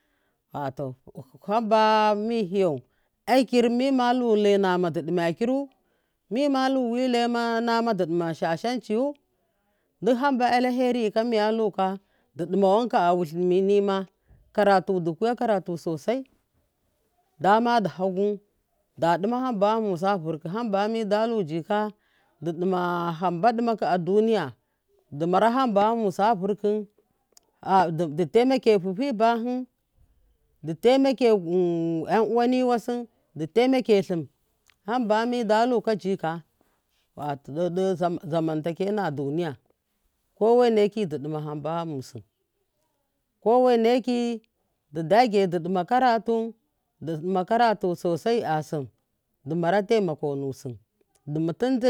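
No technical faults can be heard anywhere in the recording. Nothing in the speech calls for a timestamp or a closer look.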